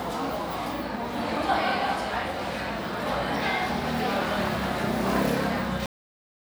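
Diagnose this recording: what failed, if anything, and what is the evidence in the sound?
The recording shows a cut-off end, a storage or buffer-flush failure. At 5.86 s the sound stops mid-event and drops straight to digital silence with no natural decay, holding silence through to the end at 6.46 s. The final buffers were never written, truncating the sound abruptly.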